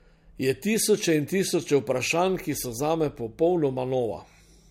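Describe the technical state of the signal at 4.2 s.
At 4.2 s, as across the whole clip, the speech has nothing above 16.5 kHz and a smeared, swirly texture. That points to low-bitrate audio saved at a high bitrate, likely a 64 kbit/s MP3 re-encoded at 320 kbit/s.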